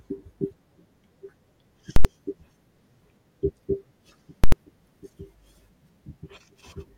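At 1.96 s and again at 4.44 s the speech gets hit by invalid numbers at full scale. A calculation blew up into infinite or invalid values, which were clamped to the largest possible sample, so the output sits flat at one extreme value, far from zero, for about 85 ms each time. That length points to a whole 4096-sample processing block going bad. You hear a very loud pop going in and another coming out, with dead nothing in between.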